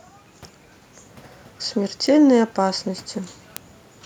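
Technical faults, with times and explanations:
0.15 to 3.99 s, word clock ticks: around twenty sharp ticks of uneven strength run through the speech at a steady rate of about one every 0.2 s. A receiver on its own clock, mismatched by roughly 100 ppm, slips one sample at each crossing.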